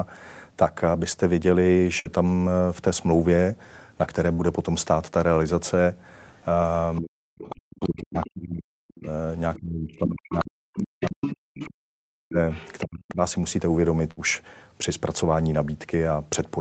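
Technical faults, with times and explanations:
1.99–2.08 s, 4.33–4.42 s and 14.11–14.20 s: burst of packet loss. Each gap lasts about 55 to 60 ms. The receiver stretches the last sound for roughly 55 to 60 ms, fading it into a buzz or hiss. Then the speech jumps ahead, with about 60 ms of speech missing.
6.38–8.30 s, 9.03–11.70 s and 12.51–13.11 s: other side's voice leaking through. A second, fainter voice sits under the main speech, about 20 dB down in the first and last stretches and about 10 dB down in the middle one. This is likely far-end loudspeaker sound that the echo canceller left in the microphone signal.
7.02–13.21 s: speech suppressed in double talk. The main talker dips while the other voice is present, for about four seconds in total, at worst falling about 40 dB, nearly to silence. Both sides were likely talking at once, so the echo canceller turned everything down.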